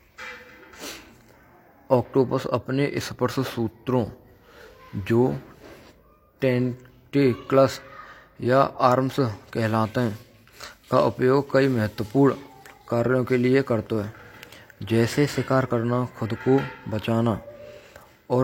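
Speech with a drift correction step: from 3.01 to 5.45 s it slows about 6% and drops a semitone, and from 15.08 to 15.66 s it speeds up about 6% and rises a semitone. Each shift holds steady and snaps back, unlike the continuous wavering of wow, which points to a likely clock-matching rate change.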